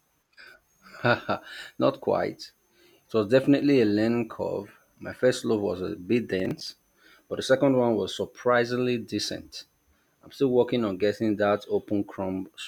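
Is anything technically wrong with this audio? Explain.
Yes. From 6.40 to 6.68 s a gritty, tearing crackle rides over the speech: processor overload crackle, where roughly seven buffers of around 10 ms missed their deadlines and replayed hard-edged scraps of old audio.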